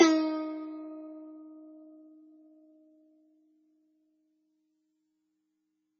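MP3 compression throughout the music: treble stops at 6.8 kHz and heavy, watery swirling appears, likely from an encoder starved of bits, which fits about 16 kbps.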